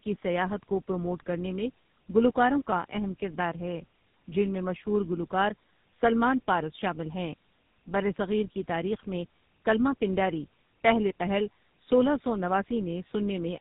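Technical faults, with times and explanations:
Throughout, tandem speech coding: the speech passed through two low-rate speech coders in succession, which fits AMR-NB at 7.4 kbit/s then GSM full rate with a G.711 link between them. The second coder re-encodes the first one's errors, so the sound is rough, muffled and warbly, with nothing above 3.8 kHz.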